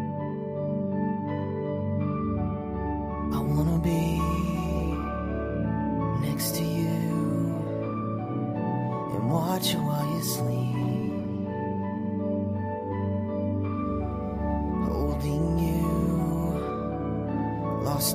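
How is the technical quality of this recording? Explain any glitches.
The technical quality holds up well, with no glitches to explain anywhere in the recording.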